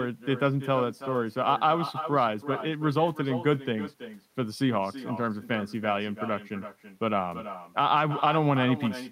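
From start to finish the speech carries an echo with no canceller. Every phrase is trailed, around a third of a second later, by a thinner copy sitting about 12 dB below the talker. What's happening is that the far end is playing the call through a loudspeaker, their microphone is picking it back up, and nothing on that side strips it out, so the talker's own voice returns after the full network round trip.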